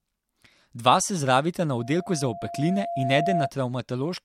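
From 1.78 s to 3.51 s, just after "se zdravita na", a loudspeaker feedback squeal rises at 687 Hz. The microphone is re-amplifying its own loudspeaker output. Unlike a steady interfering whistle, the tone swells over about a second and a half until it matches the speech in loudness.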